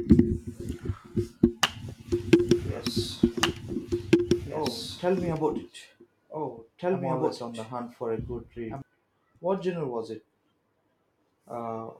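A doubled audio track runs from 2.26 s to 8.82 s: a dry, full-band copy of the speech trails about two seconds behind at roughly equal loudness, cutting in and out abruptly, likely because the signal was captured twice through a slower path.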